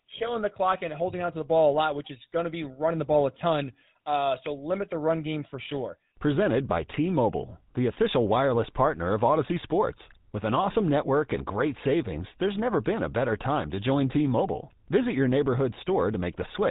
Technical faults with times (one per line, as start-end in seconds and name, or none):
0.00-16.70 GSM full-rate codec